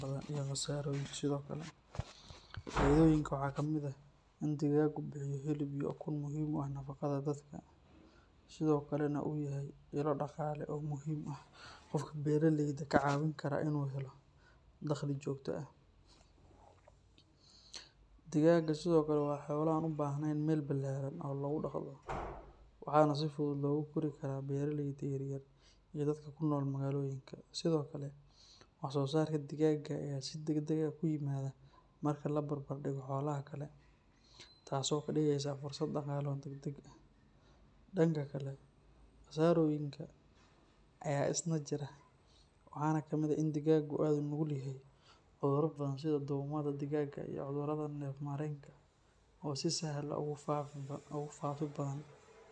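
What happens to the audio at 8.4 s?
Nothing goes wrong at 8.4 s; the speech runs through that moment intact, with no dropout, click or distortion.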